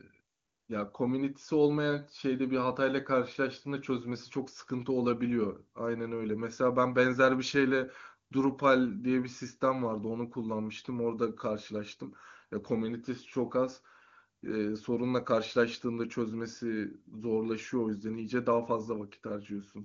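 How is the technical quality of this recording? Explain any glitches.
No glitches: the speech comes through an AMR wideband (HD Voice) path at a rate that fits 23.85 kbit/s, with the band stopping near 7.3 kHz as that codec's bandwidth dictates.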